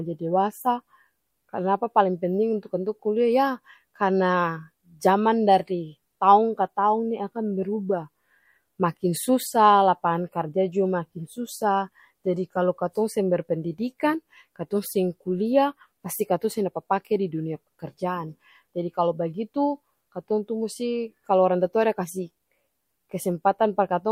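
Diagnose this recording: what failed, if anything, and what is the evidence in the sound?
Nothing stood out on listening to this speech recording, and no part of the chain, from capture through to playback, gave any audible sign of having failed.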